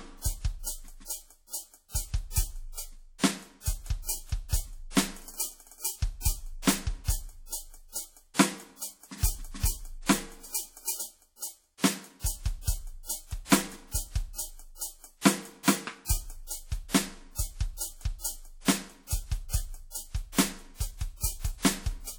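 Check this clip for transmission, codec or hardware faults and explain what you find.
One codec fault runs through the whole music clip. WMA compression is the likely cause: a ringing, washy smear with hiss that rises and falls with the music, from long transform blocks spreading quantisation noise over tens of milliseconds. The clearly audible damage fits roughly 48 kbps, yet content still reaches about 19.9 kHz, so this is coarse quantisation rather than a low-pass cut.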